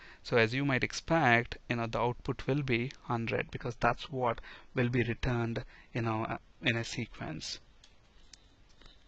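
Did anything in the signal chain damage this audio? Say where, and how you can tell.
Yes, at the network and adaptive-streaming stage. From 3.35 s to the end, the adaptive stream drops to a lower bitrate: the treble abruptly turns synthetic and artefacts rise, which fits a switch from 96 kbit/s AAC to a 16 kbit/s HE-AAC stream. There is no gap at the switch, unlike a dropout.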